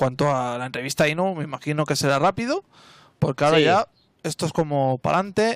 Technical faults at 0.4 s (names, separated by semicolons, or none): none